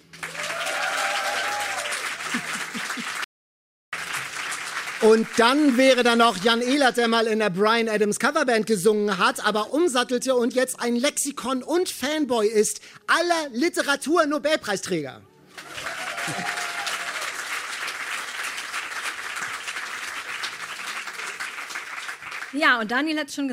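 At 3.24 s the sound cuts out to total silence, an audio dropout to silence. No room tone remains. It returns at 3.93 s, about 0.69 s later. A briefly lost input is the likely cause.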